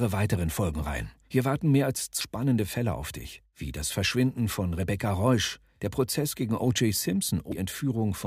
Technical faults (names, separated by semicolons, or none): CD skip